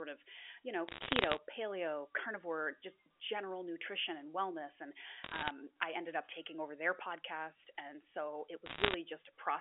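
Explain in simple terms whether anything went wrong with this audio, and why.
Yes, three short bursts of crackly ticking sit over the speech: 0.88 to 1.38 s after "of you know", 5.24 to 5.51 s after "nutrition and wellness and", and 8.66 to 8.94 s after "podcast and so it". These are bit errors on a digital phone line: roughly 0.7 to 1 bit in a hundred got flipped, and each flip corrupts one sample, with flips of high bits making a sharp tick.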